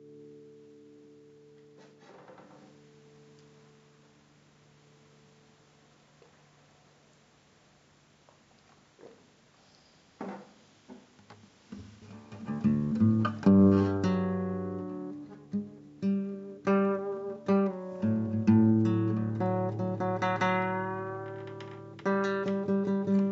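A recording of everyday sounds, with no technical faults audible anywhere in it. There is nothing that needs a time or a cause attached to it.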